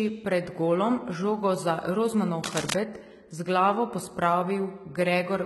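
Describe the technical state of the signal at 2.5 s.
At 2.5 s, a burst of cable scratch noise runs from 2.43 to 2.76 s. It sounds like dense, uneven scratching and rustling laid over the speech, nearly as loud as the speech itself. The likely cause is a worn cable or connector shifting, so its contact resistance jumps rapidly.

Under it, the whole clip carries HE-AAC compression damage. Nothing remains above 11.8 kHz. The treble sounds gritty and metallic. That fits a likely HE-AAC encode at about 16 kbps, with the upper band rebuilt from copied lower bands.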